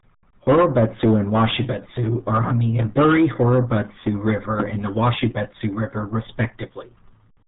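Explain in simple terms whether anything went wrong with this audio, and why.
The speech has gone through the RealAudio 14.4 codec, an old dial-up-era squeezer, for the whole clip. It throws away everything above about 3.8 kHz and crushes the rest hard, so the talking sounds muffled and gargly throughout.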